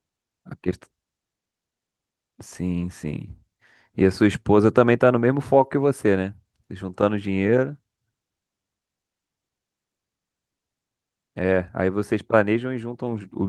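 Nothing technical goes wrong anywhere in this speech recording; it just runs along with no faults to point at.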